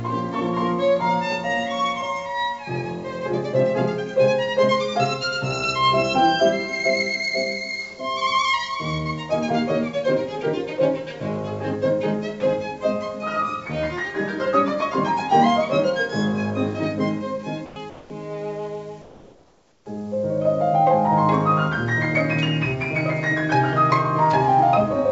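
At 17.66 to 17.76 s, 17.90 to 18.10 s and 19.02 to 19.86 s, the background detail drops out and a steady, featureless hiss takes its place, about 2, 1 and 3 dB quieter respectively, with nothing above 8 kHz. This is comfort noise in place of the background: the sender likely stopped transmitting during these pauses, and the receiver filled each gap with synthetic noise roughly matching the background.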